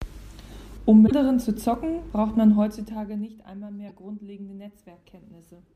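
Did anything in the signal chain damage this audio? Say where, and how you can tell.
Yes. Damaged data in a compressed stream appears at the codec stage, from 1.03 to 1.12 s and again at 3.89 s. Each is brief, about 0.08 s and 0.02 s. The decoder hits corrupt frames, loses sync and jumps to the next header. The first lands just before "zu zocken braucht".

Zipper noise follows, from 2.51 to 3.47 s, after "zu zocken braucht". The level falls by about 20 dB in 1 dB steps, roughly 30 per second. There is no smoothing, so each step clicks. That points to per-buffer gain updates in the processing chain.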